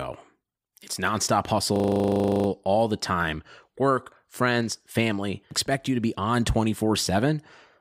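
From 1.76 to 2.48 s the speech locks into a system hang loop. The same 40 ms slice repeats 18 times, a rough 25 Hz buzz. The machine stalled while the hardware kept replaying its ring buffer. Speech then resumes with essentially nothing missing.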